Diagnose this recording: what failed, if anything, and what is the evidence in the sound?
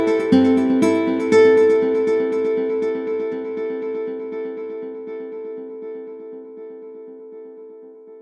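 Nothing failed: the music shows no fault at any stage, from wiring and conversion through to playback.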